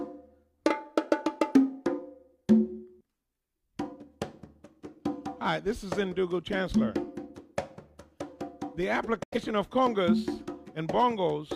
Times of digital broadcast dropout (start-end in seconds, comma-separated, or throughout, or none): 9.23-9.38